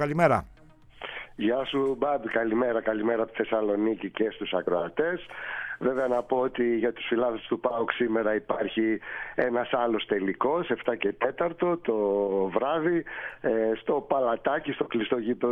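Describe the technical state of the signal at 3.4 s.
At 3.4 s the signal is intact, with no dropout, distortion, glitch or other audible fault at that point.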